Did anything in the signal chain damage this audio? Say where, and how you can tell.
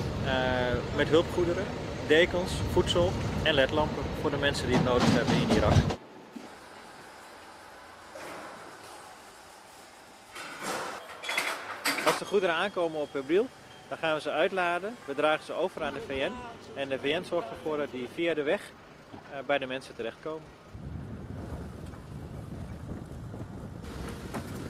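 Yes. Codec stage: a call bitrate drop from 17.04 to 19.85 s, from 48 to 18 kbps for about 1.75 s, makes the sound coarse and dull.

From 22.44 s to the end, the pace jumps to 1.54 times speed with unchanged pitch and a rushed texture, likely a time-stretched section from call processing.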